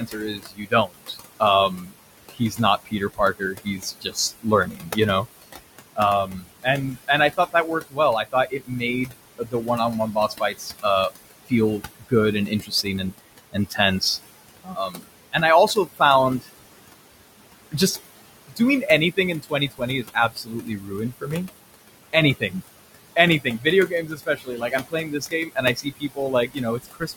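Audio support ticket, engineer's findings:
Residual background pumping throughout, dipping between phrases and rising under speech. Noise suppressor artifacts: per-band gain pulls the room noise, about 13 dB below speech, down roughly 20 dB.

Soft consonants and word endings swallowed at 0–10.85, 11.46–14.02, 14.64–16.46, 18.48–21.48 and 23.16–27.17 s, worst in the first span. Speech cut by the noise suppressor, which treats quiet speech as noise and drops it up to about 22 dB.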